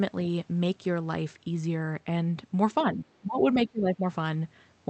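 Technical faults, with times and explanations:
2.83 to 4.04 s, speech suppressed in double talk: for about a second the speech sinks, around 20 dB at its deepest. Likely the echo canceller heard both ends at once, couldn't separate this talker from loudspeaker echo, and ducked everything.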